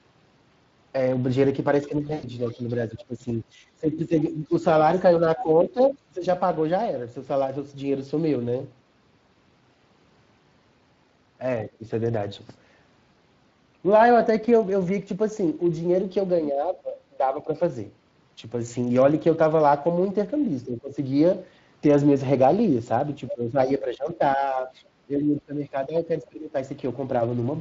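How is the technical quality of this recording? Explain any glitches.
The technical quality is fairly rough. It's a speech recording with audible codec wear throughout, a brief dropout, and several stretches where the talker gets ducked or another voice bleeds in.

The Speex codec is audible from start to finish. The speech has that hoarse, grainy CELP texture. The damage is plainly noticeable, which fits a mid-range setting of around 20 kbps. At that rate the codec has too few bits to code the excitation cleanly, so the voice keeps a fuzzy, synthetic edge rather than going fully robotic.

There's VoIP packet loss concealed by the speech codec from 2.07 to 2.28 s. About 120 ms of audio is missing within a 160 ms window, and the longest gap is about 100 ms. The decoder fills the hole by extrapolating from the last pitch and spectral shape it had, fading as it goes. You hear a short smeared stretch, and the voice stays a bit weak just after, because each rebuilt frame leans on the previous one.

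Speech suppressed in double talk shows up at 1.88–4.52, 5.2–6.25, 11.67–11.83, 16.5–17.54, 20.65–20.96 and 23.32–26.54 s. The talker's level sags by roughly 10 to 20 dB in places, with the deepest dips in the 16.5 s stretch. The most likely cause is the echo canceller mistaking overlapping far-end audio for echo and pulling everything down. The result is that the voice dulls, thins out or drops in pieces.

The other side's voice leaking through appears at 2.5–2.74 s and 4.95–5.83 s. The first leak is very faint, far below the talker, and you'd barely catch it. The second is much more obvious, only modestly quieter than the main speech. This is likely loudspeaker playback that the echo canceller didn't fully remove from the microphone.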